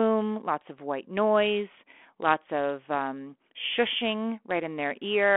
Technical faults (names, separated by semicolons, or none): none